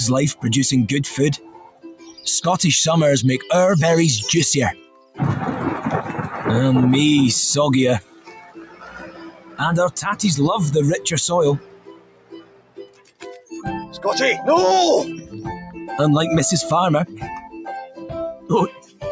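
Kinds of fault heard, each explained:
Noise suppressor applied to music or sounds: a speech-tuned suppressor stayed active throughout, treating steady content as noise, so levels pump and swing by around 20 dB.
Sound cut by the noise suppressor: the suppressor mistook steady passages for noise and pulled them down by about 17 to 18 dB, thinning sustained sound.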